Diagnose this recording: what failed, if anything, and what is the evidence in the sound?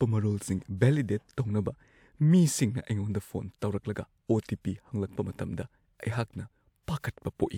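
Nothing in the chain failed: the speech signal runs continuously, with no break, distortion or disturbance anywhere along its path from capture to playback.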